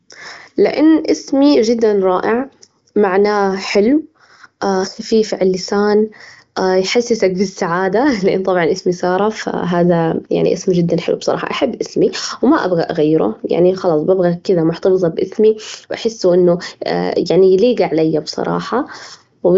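Speech through an AMR wideband (HD Voice) path, its top end stopping near 7.6 kHz and its detail consistent with the codec's 23.05 kbit/s rate, with no faults found.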